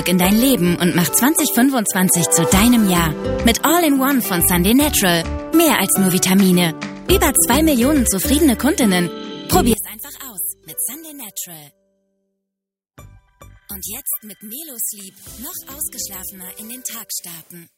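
From 9.73 s to the end, one channel inverted is the likely cause: one stereo channel appears to have flipped polarity, so on a mono sum the shared content cancels. The audio drops by about 15 dB, and the centred material falls away, leaving a faint remnant of the channel difference.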